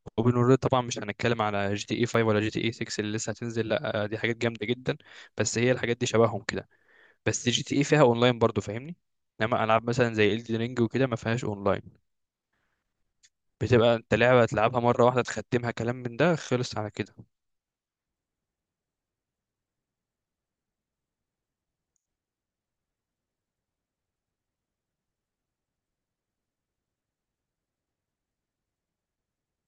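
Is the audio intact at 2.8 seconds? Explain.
Yes, the speech at 2.8 seconds is intact, with no dropout, click, distortion or other technical fault at that moment.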